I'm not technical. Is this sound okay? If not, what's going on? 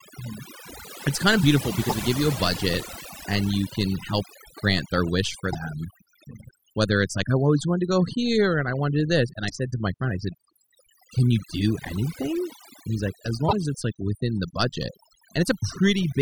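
No, the sound has two problems.

The first runs through the whole recording: overdone noise removal. A cleanup tool meant to take out background hiss was set too strong. It silences small slices of the sound wherever they resemble the noise it expects, and the quieter parts of the voice get cut along with them. The pauses drop to near silence with twinkling specks.

The second is damaged data in a compressed stream, heard four times: 1.86 to 1.94 s, 5.49 to 5.55 s, 9.47 to 9.52 s and 13.45 to 13.53 s, each lasting well under a tenth of a second and recurring roughly every four seconds. At those points part of the stored file is corrupted, so the player briefly can't read it correctly and puts out a short chirp or blip before it recovers.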